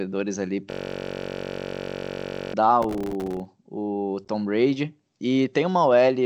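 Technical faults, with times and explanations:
0.70–2.54 s, system hang loop: the sound freezes into one 21.33 ms slice repeated 87 times, heard as a steady buzz at about 46.9 Hz rather than a stutter. The loop length fits a 1024-sample ring buffer that the hardware kept replaying while the computer or driver stalled. Unlike crackle, the repeats are identical and evenly spaced, and no new audio gets through until the loop ends.
2.82–3.45 s, processor overload crackle: a burst of gritty tearing rides on the speech for about 0.6 s and then clears. The processor repeatedly missed deadlines on very small buffers, roughly 1.5 ms each, and dozens of them went unfilled. Each miss left a short hole of silence with hard edges. Unlike the hang loop, the sound keeps moving forward, and the dropouts are irregular clicks rather than a fixed-pitch buzz.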